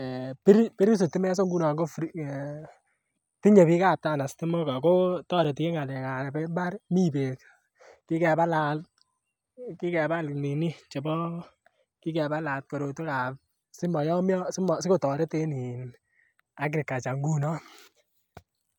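Speech with tiny skips at 5.45, 11.44 and 17.43 s, each losing just a few milliseconds, spaced 6 s apart: likely audio missing between chunks as the recorder rolls over.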